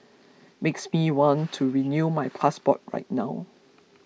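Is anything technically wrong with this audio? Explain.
No, nothing technically wrong turns up in this speech recording; there is no fault to report.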